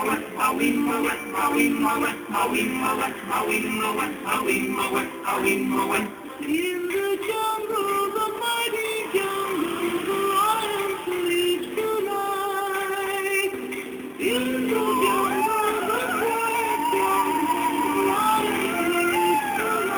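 A metallic fizz tracks the sound throughout, mirrored into 6 to 12 kHz about 16 dB down. This is imaging from sample-and-hold upsampling, with 12 kHz samples repeated unsmoothed to 44.1 kHz.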